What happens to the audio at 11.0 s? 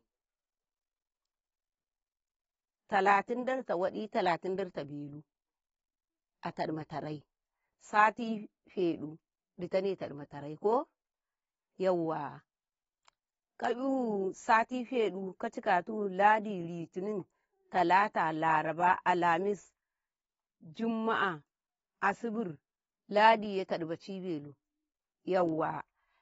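At 11.0 s the speech carries AAC compression artefacts, present throughout and likely from low-bitrate AAC-LC coding. The sound is dull and warbly, and a spectrogram shows nothing above 7.7 kHz.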